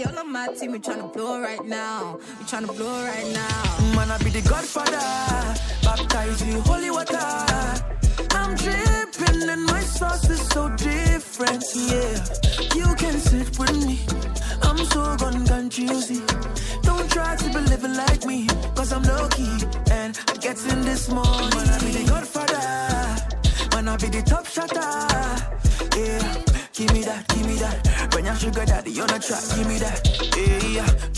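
Resampler restarted on every block, 14.8 to 17.1 s: each 100 ms block is converted from 48 kHz to 24 kHz in isolation. The resulting edge errors tick at 10 Hz.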